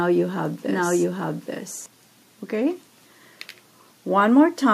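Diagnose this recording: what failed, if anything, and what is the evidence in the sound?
A doubled audio track is already running when the clip opens, and it stops abruptly at 1.86 s. A second, full-band copy trails the original by about a second, at roughly the same level. It has no decay and no room colour, so it is not an echo or reverb. The likely cause is a second, slower capture path feeding the same mix, or an edit that leaves two copies out of step.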